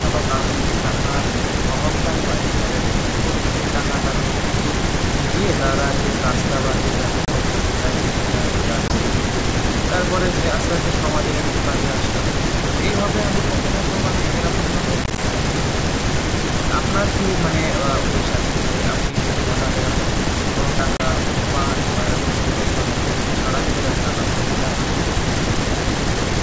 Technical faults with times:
7.25-7.28 packet loss on an ADPCM call
8.88-8.91 packet loss on an ADPCM call
15.04-15.19 packet loss on an ADPCM call
19.09-19.15 echo leak
20.97-21.01 packet loss on an ADPCM call

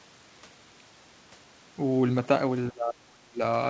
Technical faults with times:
2.70-3.42 speech suppressed in double talk

